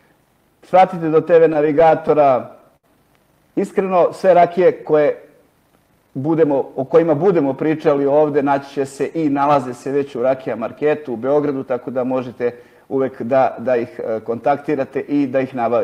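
Repeated stalls (stutter) run from 1.26 to 2.85 s: the jitter buffer kept running dry as packets arrived late, so the receiver stretched the last sound across 11 short gaps, the longest 71 ms. About 152 ms is filled in, roughly a tenth of that stretch. Nothing is lost, but the sound hitches and drags.

A jitter buffer slow-down follows from 3.52 to 4.28 s, where the receiver rebuilt its reserve by repeating tiny pitch-period slices. This adds 38 ms and plays the passage at 96% speed with unchanged pitch, so sounds are subtly drawn out.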